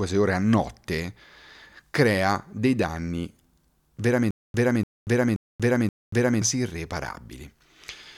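From 4.31 to 6.42 s, a stutter with silent gaps: a 292 ms burst repeats four times, separated by 235 ms of digital silence, likely a stalled stream retrying its last fragment.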